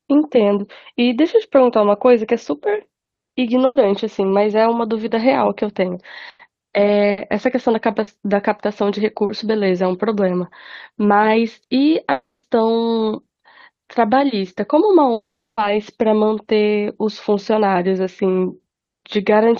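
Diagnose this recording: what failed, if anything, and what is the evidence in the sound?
Network stage, burst of packet loss at 3.65–3.77 s, 6.29–6.41 s and 7.11–7.19 s. The receiver stretches the last speech sound into a fading buzz or hiss for about 100, 100 and 60 ms, with a brief drop to silence at the first. Then the talker jumps ahead and that stretch of speech is gone.

There's a short concealed packet loss at 8.03–8.09 s, also on the network side. About 40 ms never arrived, so the decoder patched it by extrapolating the preceding sound and crossfading back. You hear a quick smear or wobble rather than a gap.

The two long network dropouts at 12.11–12.45 s and 15.13–15.59 s are likely down to the network. Concealment holds a decaying buzz or hiss, then gives way to silence for roughly 0.2 s and 0.36 s before speech resumes further on, with 320 and 440 ms lost.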